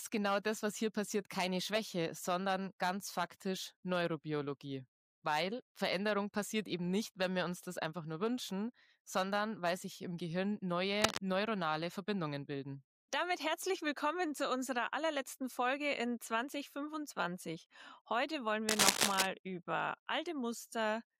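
At 11.02 to 11.19 s and again at 18.69 to 19.26 s, dense, uneven bursts of crackling rustle sit about 5 dB above the sound. This cable scratch noise is likely a worn cable or connector being moved, its contact resistance fluctuating rapidly.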